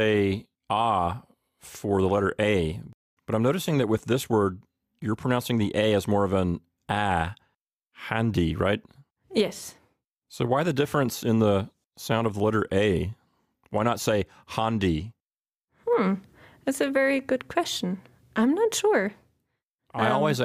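Nothing stood out as a problem on listening to this clip.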